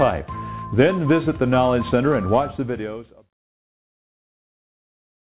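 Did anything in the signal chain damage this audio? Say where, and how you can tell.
No, nothing in the signal chain damaged this audio.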